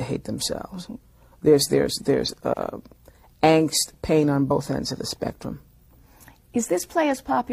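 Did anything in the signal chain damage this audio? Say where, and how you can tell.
Yes: damaged data in a compressed stream, at the codec stage, corrupted frames at 2.23–2.29 s and 4.46–4.51 s, so the decoder lost sync and briefly disrupted the sound while hunting the next frame header.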